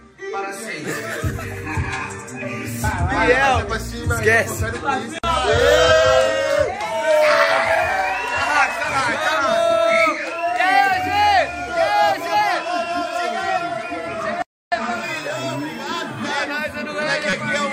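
Right near the end, from about 17.30 to 17.33 s, there's a corrupt frame decoded: a short, harsh blip that cuts across the sound for roughly a couple of codec frames. Some bits in the compressed data got flipped, and the decoder played those frames anyway, so misread gains and codes threw energy into the wrong frequencies. It's loud, peaking at around -5 dBFS, which is why it jumps out as a squeaky burst rather than a subtle glitch.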